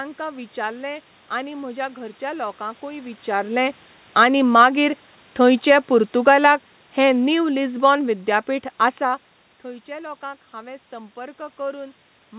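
From 6.12 to 9.3 s, after "विचारलें आनी मागीर थंयचे", automatic gain falling: the gain control judged the input too loud or its background noise too strong and eased its level down by about 6 dB, so the speech and the room noise behind it sink together.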